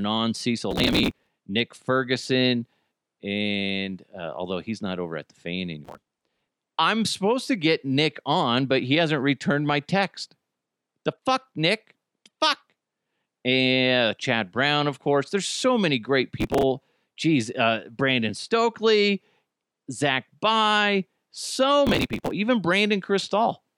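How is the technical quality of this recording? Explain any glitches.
The speech is marred by four bursts of processor overload crackle. They run from 0.71 to 1.29 s, from 5.85 to 6.48 s between "over at the fan" and "I'm supposed to get", from 16.41 to 16.63 s after "so many great", and from 21.87 to 22.31 s. In each, the processor kept missing its deadlines for short buffers, around 5 ms each. Missed buffers were skipped, leaving hard-edged gaps. Strung together, they sound like gritty, tearing crackle over the speech.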